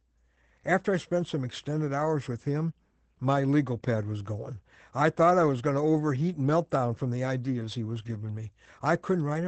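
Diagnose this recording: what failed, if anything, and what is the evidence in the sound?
Codec stage: Opus voice compression throughout the speech. Nothing above 8.5 kHz and plainly audible coarse coding fit wideband SILK near 12 kbps.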